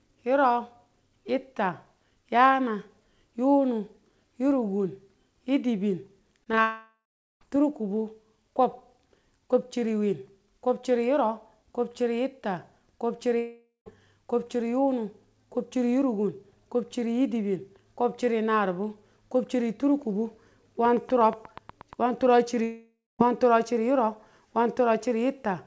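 Packets arrived late at 6.44–6.48, 6.52–6.55 and 6.55–6.59 s, about 20 ms each. The decoder papered over each short concealed packet loss by extending the preceding speech, leaving quick smears or wobbles.

A long network dropout likely followed at 6.61–7.43 s. With no packets for 0.8 s, the receiver stretched the last sound into a fading buzz, then about 0.41 s of silence, and speech resumed with that stretch gone.

Another likely network dropout at 13.39–13.88 s cost about 0.48 s. It has the same fading fill, ending in about 0.15 s of silence.

From 20.85 to 21.94 s, likely electrical interference or a struggling interface produces a train of clicks: about ten similar ticks at a regular 8.4 per second, peaking roughly 5 dB above the speech. They are audible over the talking.

A third likely dropout at 22.64–23.21 s loses about 0.56 s. The concealment fades into about 0.22 s of silence, all over the G.722 call path's band, which stops at 8 kHz.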